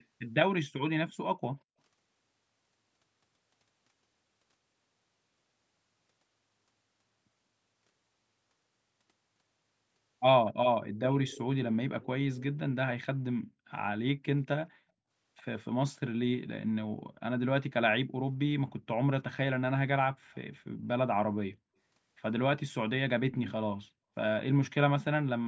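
At 0.0, 10.95, 11.29, 12.01 and 20.34 s, faint copies of the speech trail the original by 197 ms. They sit about 35 to 20 dB below it and are strongest at 11.29 s. This is likely echo leak. A spectrogram shows them as weak repeats of the harmonics, shifted right.

At 21.6 s, background gated by the echo canceller makes the room sound briefly vanish, dropping by up to about 40 dB for well under a tenth of a second. The waveform shows a sharp notch in the noise floor, and the spectrogram shows a thin blank vertical band.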